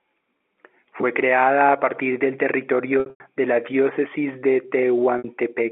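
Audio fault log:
0.39 s, 3.0–3.2 s, 5.18–5.24 s: packet loss with pitch repetition. The receiver loops the last pitch period to cover the gaps, so the 20 ms blip sounds like a brief buzzy hold. The 60 ms one at 5.18 s holds and fades. The ragged stretch just before "de la" loses 160 ms over 200 ms, with one 100 ms run long enough to fade toward silence before speech cross-fades back in.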